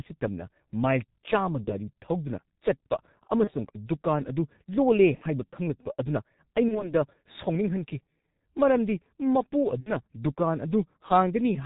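Throughout, the G.723.1 codec narrows the speech to below 4 kHz and smears it into a hoarse, muffled texture with blurred consonants, which fits a rate near 6 kbit/s. Unlike a plain low-pass filter, the voice itself turns rough because the coarse model updates slowly.

VoIP packet loss concealed by the speech codec occurs at 1.64–1.72 s, 3.44–3.53 s, 5.15–5.24 s, 6.68–6.94 s and 9.81–9.95 s. Each time, the decoder extrapolates from its last pitch and filter into a fading buzzy tone or coloured noise rather than leaving a silent gap. The first, second and fourth fit one lost 30 ms frame, and the third and fifth fit two. Distortion lingers after recovery.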